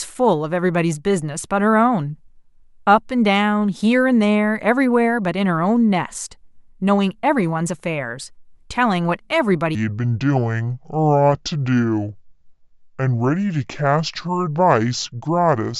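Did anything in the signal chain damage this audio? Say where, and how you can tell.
Yes. A wrong sample rate at playback runs from 9.75 s to the end: the speech slows to two-thirds speed and drops about 7 semitones, speed and pitch falling together. This fits 48 kHz material clocked out at 32 kHz without any rate conversion.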